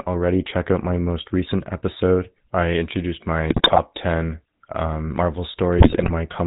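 Throughout, the speech has a buzzy, gravelly roughness with nothing above 4 kHz, the GSM full-rate codec's pulse-excited vocal-tract model, which fits a 13 kbps stream. After "recent episode I introduced", from 3.50 to 3.79 s and again from 5.78 to 6.11 s, it breaks into squawks, pops and gargling: GSM bit errors corrupting filter, pitch and gain values.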